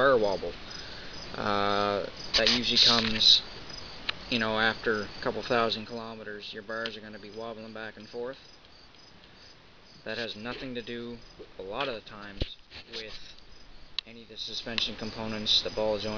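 From 5.64 to 6.08 s the level drops by roughly 10 dB with zipper noise, a fast ticking of about 50 small steps a second. It rises again by roughly 10 dB from 14.2 to 14.82 s. Unlike a smooth fade, it clicks audibly whenever the level moves.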